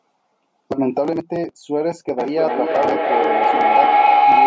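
At 2.18 s a feedback howl begins and runs to the end. The call's sound loops from loudspeaker back into a microphone, gaining on each trip. It narrows to a tone near 700 Hz, pulses roughly every 300 ms, and peaks about 7 dB above the speech.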